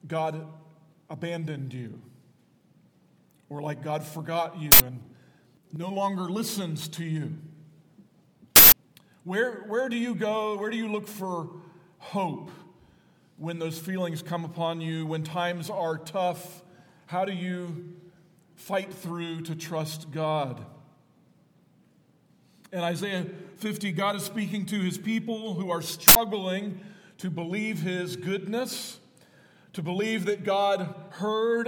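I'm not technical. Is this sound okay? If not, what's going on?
No, three sudden harsh noise bursts, at 4.72, 8.56 and 26.08 seconds, come from an uninitialised buffer: the player grabbed leftover memory junk before real audio arrived, about 80 to 160 milliseconds each.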